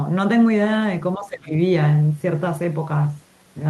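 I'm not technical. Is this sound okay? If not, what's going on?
No. From 1.17 to 1.53 s the speech sinks sharply, then returns. This is likely speech suppressed in double talk: the echo canceller mistook the talker for echo while both sides spoke. A network dropout would instead cut to total silence.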